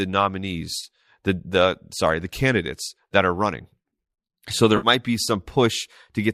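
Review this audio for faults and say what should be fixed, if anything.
AAC frame loss with concealment occurs at 0.79–0.84 s, just before "the the sorry the", and at 4.77–4.87 s. Gaps of about 30 ms and 60 ms fit three and six 10 ms frames, likely from low-delay AAC. The decoder patched each from the last good spectrum, leaving short smeared, phasey stretches.

To prevent it, add forward error correction or packet redundancy and a deeper jitter buffer on the transmission path so frames stop going missing.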